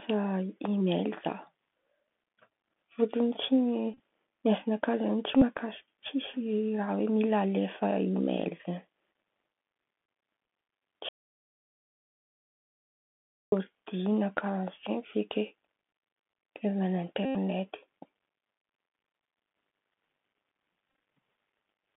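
The whole recording runs through the Bluetooth CVSD headset codec, so the speech sits in a narrow band of roughly 200 Hz to 3.5 kHz. The adaptive one-bit coder audibly struggles: s sounds come out scratchy, loud bright moments distort, and there's a grainy hiss under everything.

Bluetooth headset packet repeats show up four times. At 3.94 to 4.00 s, about 45 ms goes missing in bits scattered over 60 ms, with the longest run around 30 ms. At 5.37 to 5.43 s, 45 ms is lost. At 17.25 to 17.37 s, about 94 ms drops out. At 20.89 to 20.99 s, 60 ms is lost across 105 ms, with runs of around 15 ms. Each time the headset replays stale packets, and the longer runs turn into a brief buzz near 267 Hz.

From 11.09 to 13.52 s there's an audio dropout to silence, about 2.4 s of silence with no room tone. The sound cuts off mid-flow and comes back just as abruptly. The likely cause is the input link or device briefly going away while the recorder kept writing.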